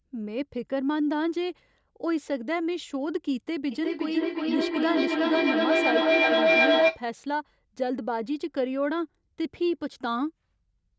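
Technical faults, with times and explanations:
3.71–7.04 s: feedback howl. The mic-to-speaker loop gains on every pass, so a tone near 700 Hz builds, pulsing roughly every 400 ms and peaking about 6 dB over the speech.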